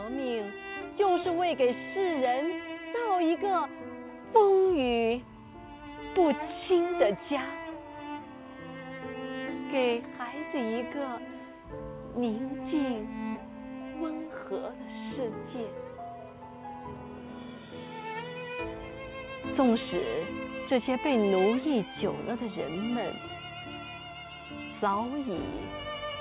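No technical faults can be heard anywhere in the clip. It comes through a WebRTC call path, and nothing reaches above 4 kHz, which gives it the narrowband telephone sound that fits G.711 A-law coding.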